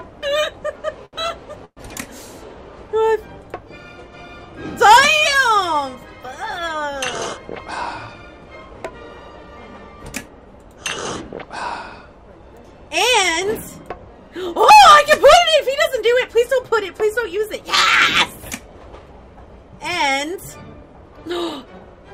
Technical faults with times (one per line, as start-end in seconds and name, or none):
1.05-1.15 short stall from a late packet
1.65-1.79 call audio freeze
7.61-8.45 jitter buffer speed-up
18.99-19.46 jitter buffer speed-up